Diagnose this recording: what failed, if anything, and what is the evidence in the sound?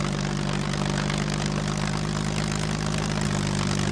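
Nothing failed here that I can hear: no stage in the chain, from the wiring through to playback, leaves any mark on the sound.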